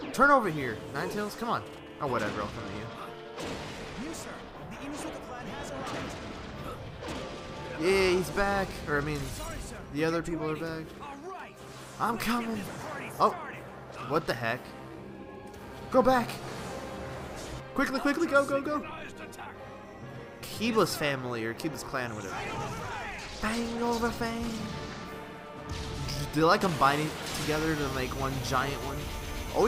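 There are no technical faults in the audio, so there is nothing to describe in time order.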